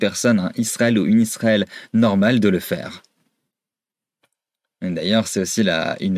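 No technical faults can be heard at any point in the speech recording.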